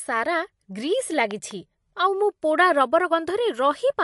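MP3 compression runs through the whole clip: the speech has a watery, swirly quality and smeared attacks, and nothing is present above 11.3 kHz. This is likely MP3 encoding at a low bitrate near 51 kbps, which drops weak frequency lines and cuts the treble.

A loud pop occurs from 1.31 to 1.53 s: two sharp pops, about 10 dB above the speech, sit on top of it while the speech continues underneath. The likely cause is a sudden voltage step or pulse, such as from a plug, switch or static discharge.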